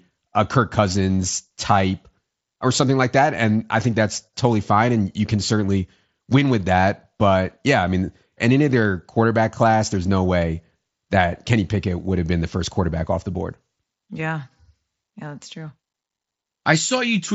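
Nothing in this speech recording points to a technical fault. The sound reaches only up to about 8 kHz, with a faint grainy edge on louder moments, as expected of the Bluetooth mSBC headset codec that carries it.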